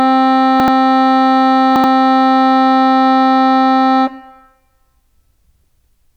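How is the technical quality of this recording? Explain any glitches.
Two brief glitches spoil the music, both of the same kind: chunks out of order, at 0.60–0.68 s and 1.76–1.84 s. In each case a 40 ms block of audio arrives one chunk late and plays after the block that should follow it. No material is lost, but the sequence is swapped, creating three hard splices within 80 ms. Each event is heard as a short jumbled stutter.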